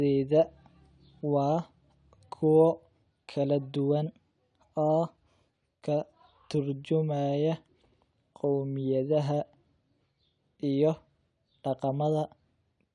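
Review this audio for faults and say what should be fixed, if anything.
Wrong sample rate from 4.06 to 5.56 s: the speech turns slightly high and hurried, running about 1.09 times fast and roughly 1.5 semitones sharp, which fits 22 kHz audio being played at 24 kHz without conversion. Resample to the playback device's rate, or tag the stream with its true rate, before output.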